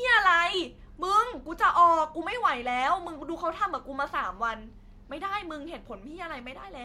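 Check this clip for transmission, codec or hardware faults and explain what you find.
No transmission, codec or hardware faults turn up anywhere in the recording. The speech arrives intact, with nothing to flag.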